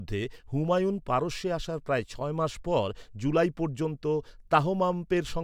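Nothing in this bit of speech stands out as a technical fault, so there's nothing to flag here.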